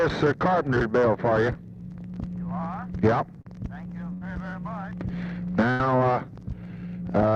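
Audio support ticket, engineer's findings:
Short concealed packet loss, 3.41 to 3.47 s: brief smear where roughly 40 ms of audio never reached the decoder in time. Receiver-side concealment extended the preceding sound for about 36 ms, then crossfaded back into real audio. Network or jitter buffer, not the source.

Burst of packet loss, 4.13 to 4.23 s and 5.71 to 5.81 s: each drops about 80 ms of audio. The decoder's concealment stretches the last sound for about 80 ms while fading it, giving a held buzz or fading hiss, then the audio picks up with that chunk gone. Consecutive packets lost or arriving too late.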